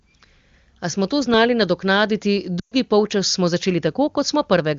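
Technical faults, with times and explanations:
2.59 to 2.74 s, lost AMR speech frames: just after "smo to znali nadoknaditi" the speech drops to near silence within two frames, and the whole dropout lasts about 120 ms, which fits a run of about six 20 ms frames. The decoder repeats the last good pitch and spectral shape while lowering the gain. On a spectrogram, harmonics turn into flat horizontal smears that fade out. On the waveform, a decaying envelope leads into a near-flat gap before a weak restart. The surrounding wideband 23.85 kbit/s audio keeps its band up to 7 kHz.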